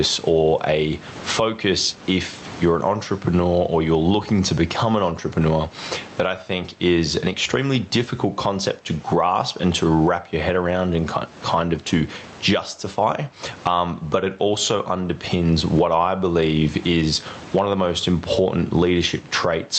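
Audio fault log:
throughout, gain pumping: The gain swings by around 20 dB, while loud and quiet passages sit unnaturally close together and the speech sounds squashed. The likely cause is microphone gain set far too high, with a fast limiter or compressor clamping down on each loud moment and releasing in the gaps.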